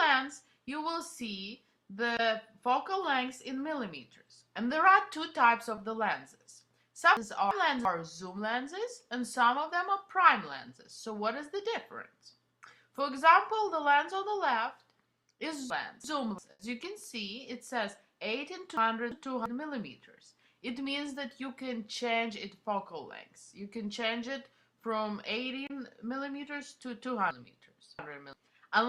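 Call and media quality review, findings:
Short concealed packet loss at 5.75 s. Brief smear in the sound, about 20 ms long. Probable component: network path into the jitter buffer and decoder. The audio arrived too late. The receiver extended the preceding sound to cover it, then blended back into the real audio. The original 20 ms is gone.

Chunks out of order at 7.17 to 7.85 s, 15.70 to 16.38 s and 18.77 to 19.46 s. Each is a jumbled moment. Probable component: capture or recording buffer write path. A 341 ms chunk played one slot late, after the chunk meant to follow it. The swap creates three hard joins. No audio is lost.

Chunks out of order at 27.31 to 28.33 s. Longer jumble. The same 341 ms chunk size points to the same buffer. This time the chunk lands two slots late, so the scramble covers about a second.

Burst of packet loss at 16.51 to 16.61 s. The sound holds briefly, then fades. 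It resumes 80 ms further on, and the 80 ms in between is missing. Probable component: network transport. Several consecutive packets missed their playout deadline. Concealment extended the last sound and attenuated it until real packets returned. This happens just after the second reordered chunk.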